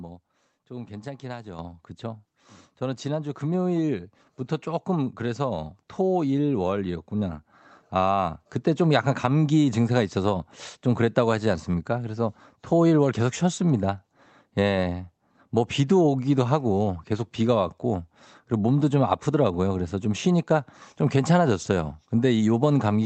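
At 1.59 s the microphone volume is stepped up by about 7 dB at once, as the call software judged the input too quiet. Speech and background noise jump louder together. The waveform envelope widens abruptly, and the spectrogram brightens below the codec's 8 kHz ceiling.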